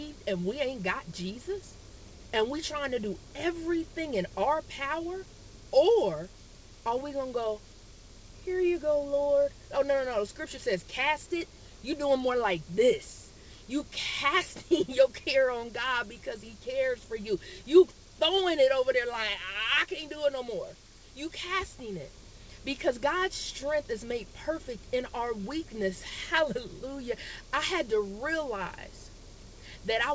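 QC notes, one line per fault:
No faults are present: the audio carries nothing above 8 kHz and the usual coding texture, consistent with a wideband call codec such as G.722 at 64 kbps working as intended.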